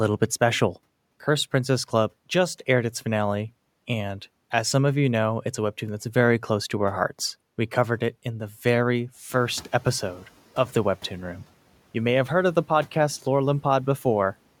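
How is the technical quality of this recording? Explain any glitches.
The recording has one glitch, caused by the noise suppressor catching up.

From 9.29 to 10.26 s, the room noise jumps by about 10 dB. The suppressor's noise estimate lags behind that jump. For about 970 ms the louder noise comes through with less reduction. Then the estimate adapts and the noise sinks by about 7 dB. After the rise, the room noise sits about 27 dB below the speech.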